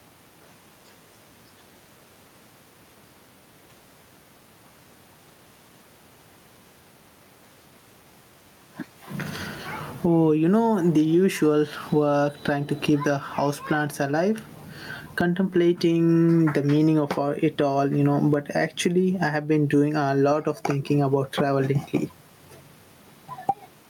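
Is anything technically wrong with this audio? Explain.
Yes. Throughout, gain pumping makes the background swell in pauses and duck by roughly 15 dB under loud speech, squashing the level. The likely cause is excessive input gain being clamped by a fast limiter.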